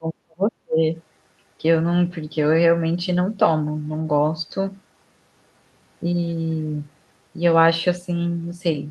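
Speech clip whose first 0.83 s shows speech suppressed in double talk: the level dips by up to around 40 dB, visible as lowered stretches in the waveform, likely an echo canceller ducking both talkers.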